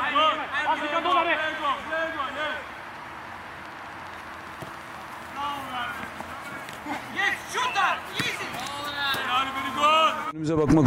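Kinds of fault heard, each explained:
Train of clicks: From 3.66 s to 5.51 s a run of near-identical short pulses rides over the sound at a steady 14.6 clicks per second, about thirty in all, heard as a fast, even ticking. The pulses peak about 5 dB above the surrounding level. The regular spacing and uniform shape point to a repeating external source, likely electrical interference from nearby equipment or a faulty connection or power supply.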